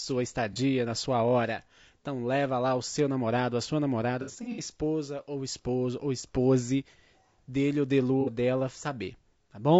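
It's a speech clip with plainly audible codec damage throughout: the voice comes across rough and grainy, with noise filling in between the harmonics. That's most likely low-delay AAC compression, AAC-ELD as used on video calls, and the amount of damage fits a low bitrate somewhere around 32 kbps. At that rate the codec can't spend enough bits on its roughly 500 frequency lines per frame, so the gaps between harmonics get noise-filled and the detail suffers.

On top of that there's AAC frame loss with concealment in three spots. At 0.53 to 0.57 s about 30 ms goes missing, which fits a single lost frame. Around 4.22 to 4.60 s, about 180 ms is lost in pieces scattered over roughly 360 ms, the longest stretch being around 70 ms. At 8.21 to 8.30 s it's about 60 ms. Each time the decoder patches the hole from the last good spectrum, so those spots come out smeared, noisy or phasey rather than silent.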